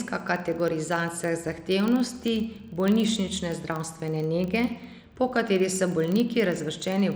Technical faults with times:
0.00-7.15 filter restarted on every block

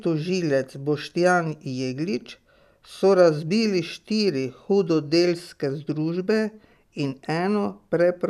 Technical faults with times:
none

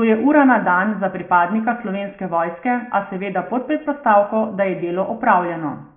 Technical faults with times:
none

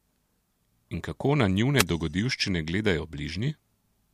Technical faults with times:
1.77-1.84 wireless microphone noise hit

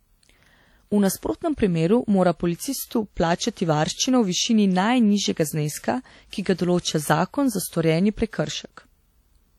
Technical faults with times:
0.00-9.59 WMA compression

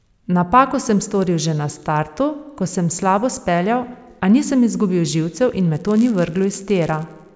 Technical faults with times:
5.73-7.35 resampler restarted on every block

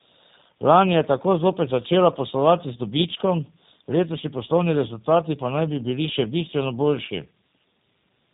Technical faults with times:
0.00-8.33 tandem speech coding

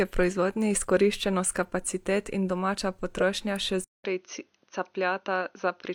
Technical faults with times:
3.17 corrupt frame decoded
3.84-5.94 input switched to a poorer device

